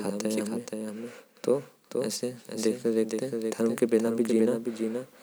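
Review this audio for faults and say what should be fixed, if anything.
The whole clip carries a doubled audio track: a second, clean copy of the speech trails about half a second behind, roughly 5 dB quieter, with no room tail. That's likely a second capture path or a misaligned duplicate in the edit. Make sure only one input or track feeds the mix.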